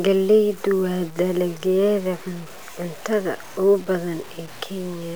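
Grainy distortion that follows the speech runs throughout, roughly 25 dB below it. Quiet parts drop out or sputter. The likely cause is low bit depth without dither, fitting about 6 bits.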